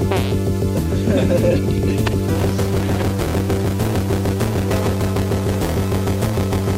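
From 2.35 s to the end, a steady robotic buzz near 200 Hz rides on the sound: buffer tearing, with roughly a fifth of each buffer replaying audio about 10 ms old.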